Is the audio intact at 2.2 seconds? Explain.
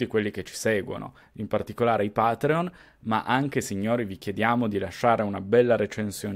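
Yes, the speech at 2.2 seconds plays through cleanly, with no dropout, click, distortion or other fault audible at that moment.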